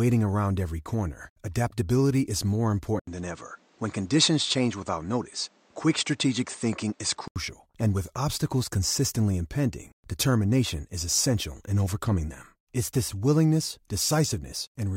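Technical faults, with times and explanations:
2.99–7.36 s, input switched to a poorer device: the speech drops out for about 80 ms, then turns dull, cut off above 8.8 kHz, with fresh background noise roughly 35 dB down and level unchanged, until it clears; likely a move to a narrower-band microphone.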